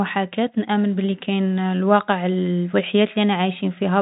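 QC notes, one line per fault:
No fault is present: the speech carries the 3.8 kHz upper limit of G.711 telephone coding and, at most, a faint trace of its level-following quantisation noise.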